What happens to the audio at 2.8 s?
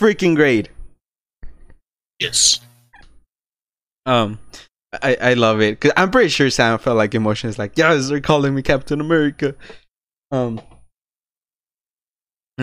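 Nothing goes wrong at 2.8 s; the speech passes through that moment intact, with no dropout, click or distortion to be heard.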